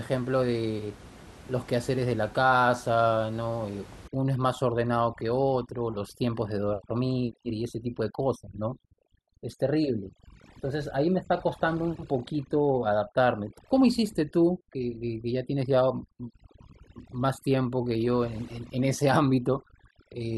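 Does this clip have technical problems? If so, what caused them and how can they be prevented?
Yes. From 4.08 s to the end at 20.38 s the speech shows overdone noise removal. The room noise, sitting about 21 dB below the speech before that point, is pushed down and breaks up, leaving twinkling specks where individual frequency bands flicker in and out. The suppressor is cutting bands that fall close to its noise estimate, and quieter speech components in those bands are removed too. To prevent this, set the noise reduction to a gentler strength with a higher floor so some background remains.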